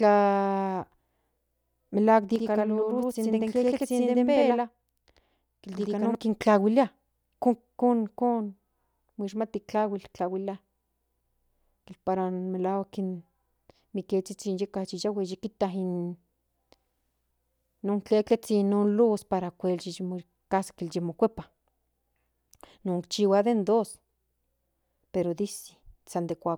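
Channel delay (doubling) runs from 2.36 s to 6.15 s. One channel arrives late by about 85.3 ms, which fits a 4096-sample buffer, and when the two channels are folded to mono the late copy sits at equal level beside the original. At that gap the ear doesn't fuse them, so the speech sounds doubled, with a distinct slap echo trailing every syllable until the channels realign.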